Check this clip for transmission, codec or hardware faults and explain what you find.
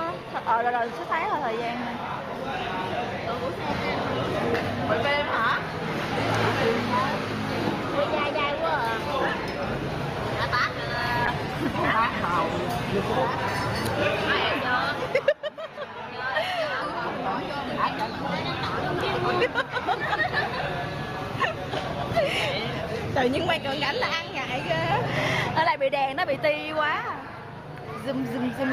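There's one fault, a call bitrate drop. From 11.27 to 13.53 s the bandwidth estimate dips and the encoder gets starved. The detail turns coarse and rough, bottoming out for about 1.2 s, which fits the rate roughly halving from 32 to 16 kbps before it recovers.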